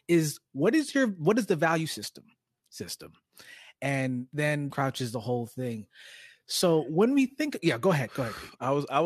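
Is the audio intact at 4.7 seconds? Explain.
No. At 4.69 s the speech jumps abruptly from "and then" to "the whole thing" with a small blip at the join. This is likely a stream segment skipped: one chunk of the segmented stream failed to load, and playback continued from the next.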